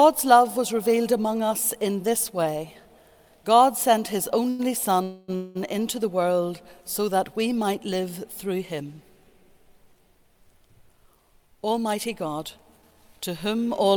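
At 4.49 s there is a short stall from a late packet. The jitter buffer ran dry, so the last sound is held for about 0.1 s with a slight buzz or dip. Then the audio resumes from the same point, so nothing is lost.

From 5.03 to 5.30 s and again from 5.36 to 5.57 s, the sound stops moving forward. It carries on as a fading buzz or hiss rather than dropping to silence. This is a call audio freeze, likely from packets held up in transit. The first hold lasts about 0.25 s and the second about 0.19 s. Each time the audio picks up where it stopped.

From 10.51 to 12.40 s comes a jitter buffer speed-up. The receiver trims tiny pitch-period slices to catch up. It removes roughly 0.15 s in total, so the audio runs about 7% fast at unchanged pitch. A second speed-up from 12.82 to 13.96 s runs about 6% fast and drops roughly 0.07 s. Both sections sound slightly hurried.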